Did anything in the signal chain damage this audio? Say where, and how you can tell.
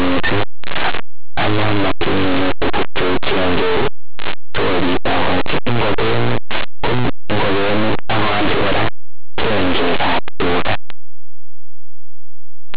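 Yes: linear audio read as companded at sample-format conversion. The 8-bit samples were expanded as mu-law, turning values just on one side of zero into the largest outputs while those on the other side stay small, heard as very loud, harsh distortion throughout.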